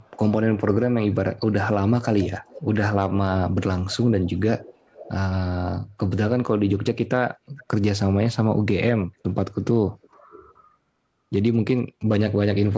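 From the start of this speech clip, a faint delayed copy of the talking keeps coming back. It is an echo leak. It trails the original by about 450 ms. It appears at 0.0–0.11 s, 1.11–1.15 s, 1.88–2.75 s, 4.28–5.11 s, 7.58–7.65 s and 9.9–10.54 s. The first two scraps are very faint, around 40 dB down. The longer stretches are clearer, roughly 20 to 25 dB down. The likely cause is a far-end loudspeaker whose echo canceller let part of the pickup return.

From 11.54 s to 12.73 s, GSM signalling bursts appear. They sound like a galloping dit-dit-dit of short buzzes at 217 Hz. They sit about 30 dB below the speech. A nearby 2G phone was exchanging signalling with its network. The audio circuitry rectified that radio energy into audible sound.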